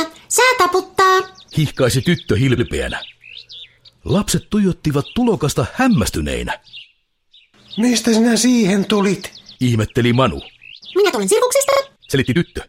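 At 2.57 s, repeated frames: an 80 ms stretch of the compressed stream plays once more, adding 80 ms, which fits a run of four frames being duplicated. It is heard as a brief stutter. On a waveform the same 80 ms shape appears twice in a row.

From 10.73 s to the end, a time-stretched section runs about 1.59 times faster at unchanged pitch, likely from software squeezing the audio to fit a length by dropping short pieces. It sounds rushed. The spectrogram's harmonics stay at the same height while events crowd closer together.

Inside that stretch, at 11.71 to 11.79 s, repeated frames return: a 40 ms block plays two extra times, adding 80 ms. The result is a quick triple stutter, with identical 40 ms segments repeating back to back on the waveform.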